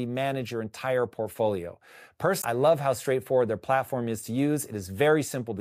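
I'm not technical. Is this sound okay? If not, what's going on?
No. At about 2.39 to 2.45 seconds, right before "love how straightforward their", there's a brief glitch lasting about a twentieth of a second. That's damaged data in a compressed stream: a small piece of the file was corrupted, so the player couldn't read that part properly and then skipped ahead to the next good chunk. Unlike a simple dropout, which just goes silent, this one comes from the player losing its place in the damaged data.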